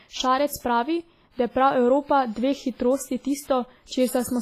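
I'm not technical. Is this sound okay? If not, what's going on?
No. All the way through, the speech sounds washy and ringing, with a hiss that swells and fades with the voice, and nothing above 15.4 kHz. The likely cause is heavy WMA compression, which smears detail and drops quiet sounds to save space.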